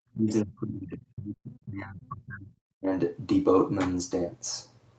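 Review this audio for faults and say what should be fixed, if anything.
From 0.13 to 2.91 s the speech keeps sinking and thinning, falling by about 30 dB at its deepest, with roughly two seconds in all turned down or chopped. This is likely speech suppressed in double talk: the echo canceller couldn't tell this talker from loudspeaker echo while both sides spoke, so it attenuated everything. Prevent it with better echo-path modelling or gentler double-talk suppression.

Two short stalls from a late packet follow the same pattern. From 1.35 to 1.45 s a sound is held for 80 ms, and from 2.59 to 2.68 s another is held for 71 ms, each with a slight buzz or dip. The jitter buffer ran dry, stretched the last audio, then resumed without losing anything. A deeper or adaptive jitter buffer would prevent this.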